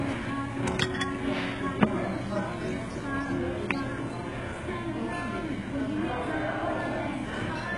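Throughout, nothing is present above 11.4 kHz. This is likely low-bitrate audio saved at a high bitrate: the later encoding cannot restore detail the first one discarded.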